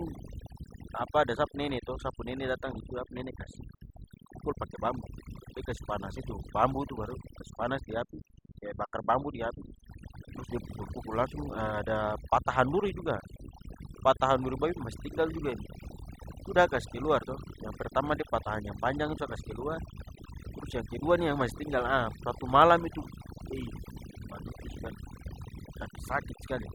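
From start to finish the speech carries overdone noise removal. A noise reduction stage was driven too hard on a noisy source, so any frequency band sitting near its noise estimate is pulled far down or gated off entirely. The quieter components of the voice fall under that threshold and vanish along with the noise. The background collapses to near silence dotted with twinkling specks.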